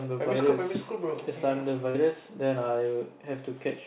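At 1.90 s, roughly 40 ms of the call failed to arrive in time, a short concealed packet loss. The receiver bridged the gap by extending the preceding sound for about 42 ms before rejoining the real stream, leaving a brief smeared wobble in the speech, which is band-limited below 4 kHz by the G.711 A-law call path.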